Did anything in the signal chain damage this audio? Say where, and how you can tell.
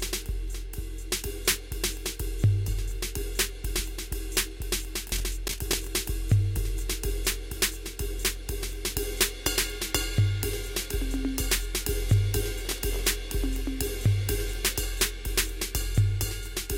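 Yes. The damage comes from the driver or buffer stage as processor overload crackle, from 5.09 to 5.88 s and again from 12.65 to 13.02 s. In both stretches a gritty, tearing crackle rides on the music and then stops cleanly. The processor missed its deadlines again and again, for roughly 15 buffers in the first stretch and 10 in the second, and each miss replayed a stale slice of earlier audio with hard edges. The grain of the crackle fits buffers of around 10 ms.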